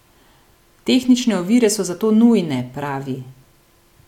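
No technical faults can be heard anywhere in the recording.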